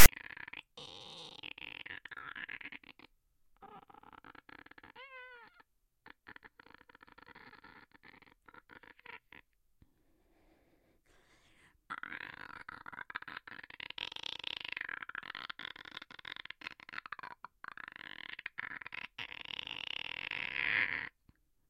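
From 0 to 0.06 s, file tags are played as audio. Text bytes read as samples give a harsh, lopsided rasp. Zero padding then drops to silence, with hard edges.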